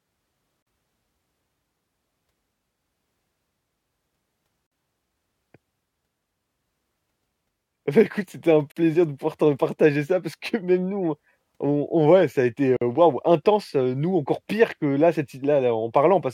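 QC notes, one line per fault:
0.62, 4.67, 8.72 and 12.76 s: gap at a join of encoded pieces. Segments encoded separately and butted together every 4 s keep their encoder start delay and last-frame padding, so 43 ms, then 49 ms, silences break into the speech (e.g. after "ouais ça a été") before it resumes.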